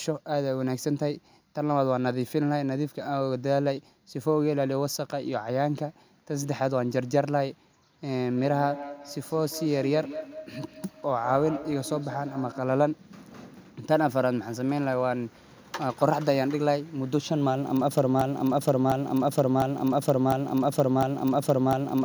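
From 8.37 to 12.82 s there's feedback echo between two devices: the speech comes back roughly every fifth of a second, thinner each pass, peaking about 13 dB down. Then from 18.21 s to the end it turns into a broken-record loop, with a 0.70 s fragment repeating five times back to back, likely a stalled player or stream.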